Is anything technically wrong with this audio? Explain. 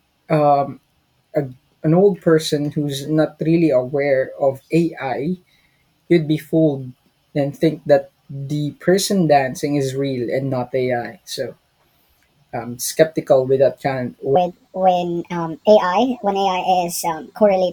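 Yes. Section at the wrong speed, from 14.36 s to the end, right after "skeptical with that kind": the speech runs 1.37 times too fast, likely from being played against the wrong clock, so it sounds hurried and about five semitones higher.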